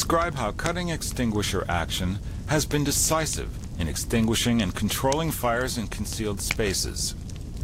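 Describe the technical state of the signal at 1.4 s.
A corrupt frame decoded at about 1.36 s: a couple of damaged frames were played as-is, giving a brief blip near -30 dBFS, a thin vertical smear on the spectrogram.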